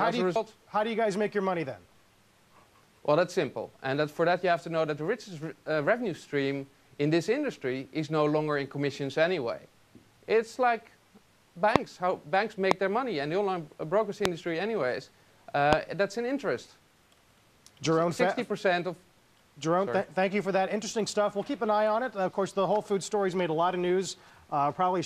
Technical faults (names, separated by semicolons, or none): loud pop